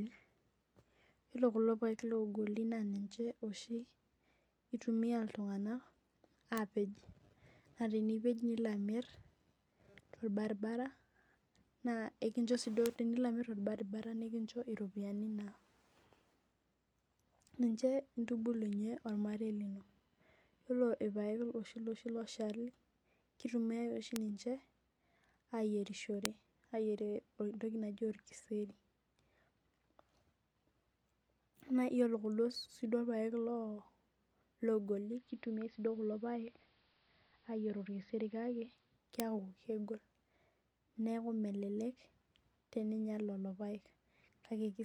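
A single flipped bit in the digital path, a bit error spike, jumps one sample or a few by a power of two and returns, giving isolated sharp broadband ticks in the speech at 6.58, 12.86, 24.16 and 26.25 s. At 34.94 s the receiver loses the digital stream and blends to analogue AM over about 383 ms. Level drops about 1 dB, and hiss rises to around 35 dB below the speech until the blend back at 39.04 s. Another bit error spike ticks at 39.20 s.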